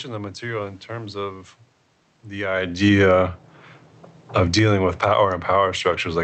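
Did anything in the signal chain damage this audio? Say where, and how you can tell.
Yes. The damage is in the call processing stage, where automatic gain falling pulls the level down from 2.34 to 3.19 s by about 9 dB, and again from 4.27 s to the end. The background sinks with the voice, so it's the gain, not the talker moving around 2.5 s.

Right after that, automatic gain rising pushes things back up by about 6 dB between 3.1 and 3.54 s. You can tell because the room noise swells in step with the voice. The AGC decided the input had gone too quiet and ramped its gain back up.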